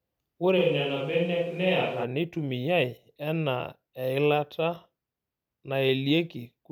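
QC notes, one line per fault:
0.59 to 2.03 s, switch to a distant microphone. The speech suddenly turns roomy and hollow, with thinner bass. Loudness stays about the same. Background room noise rises to roughly 30 dB below the speech. At 2.03 s the close, full sound snaps back just as abruptly. The likely cause is that the close microphone dropped out and a mic further from the talker took over. Distance adds room reflections and loses low-end proximity.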